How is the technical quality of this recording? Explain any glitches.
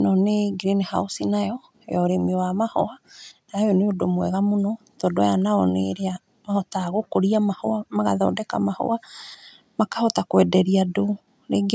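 No glitches turn up in the recording; the speech shows the normal signature of call microphone processing, with the lowest bass filtered out and nothing above 8 kHz.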